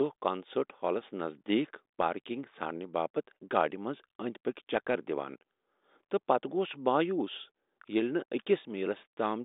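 No faults are audible anywhere in this speech recording.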